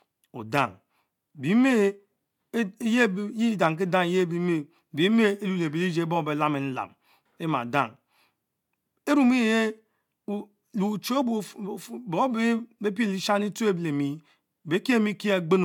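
No technical faults are audible.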